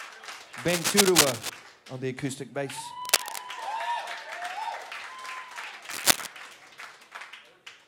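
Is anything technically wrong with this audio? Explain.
Yes. Cable scratch noise at 0.68 to 1.50 s, 3.05 to 3.38 s and 5.90 to 6.27 s. A worn, moving connector is the likely cause. Its fluctuating contact resistance produces rough scratching bursts about 10 dB above the sound, and about 5 dB at 3.05 s.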